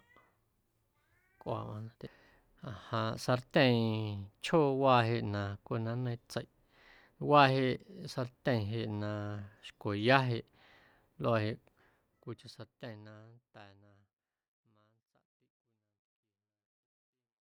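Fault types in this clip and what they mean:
No faults are present in this speech clip. The level fades out smoothly over roughly the last six seconds, reaching silence at 17.5 s with no click or hard edge, as an editor would finish it.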